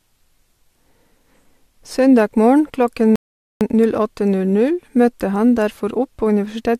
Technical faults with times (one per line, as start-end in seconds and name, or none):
3.16-3.61 rebuffering stall